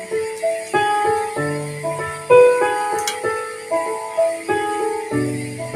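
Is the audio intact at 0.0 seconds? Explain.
No. At 0.0 seconds the sound is already under a noise suppressor applied to music or sounds, and it stays there for the whole clip. A processor built to clean up speech treats held tones, ambience and reverb as noise. It pulls them down while sharp onsets slip through. The level swings by roughly 10 dB as it clamps and releases. Sustained parts and tails sink, so the sound pumps and thins out.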